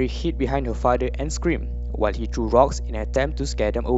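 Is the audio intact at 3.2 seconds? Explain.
No. At 3.16 s there is an overlap between stream segments: two segments claim the same stretch of time, so the player discards a few milliseconds that were never actually duplicated. The waveform jumps across the gap, producing a brief click or tiny skip in the speech; the segments here are about 1 s long.

A steady 60 Hz mains hum also runs through this moment, as it does across the whole clip. It is strong, sitting close to the speech level. It is the sort of low tone a ground loop or nearby transformer couples in from the power line.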